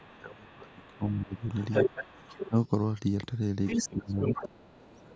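An echo canceller likely caught in double talk and unable to tell the talker from loudspeaker echo turns the speech down from 0.0 to 1.44 s, 1.85 to 2.3 s, 2.49 to 2.55 s, and 3.86 s to the end. The voice dips by roughly 20 dB, reaching about 25 dB near the close, and parts of it drop out. Likely incomplete echo removal also lets the other side's voice leak through from 0.01 to 2.49 s at around 10 dB below the speech. It leaks again from 3.66 to 3.88 s at about the same level as the talker, from 4.1 to 4.71 s slightly quieter, and faintly from 4.89 s to the end.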